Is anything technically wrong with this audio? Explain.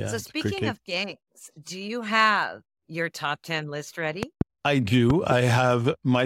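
Yes, the speech is interrupted twice by a loud pop, both times as a double pop. The first runs from 4.23 to 4.43 s, just after "your top ten list", peaking about 15 dB above the speech. The second, from 5.10 to 5.34 s, is about 10 dB above it. Each is likely a voltage step or pulse, perhaps from a plug, switch, static or driver glitch, shaped by the circuits downstream into sharp thumps that sit on top of the continuing speech.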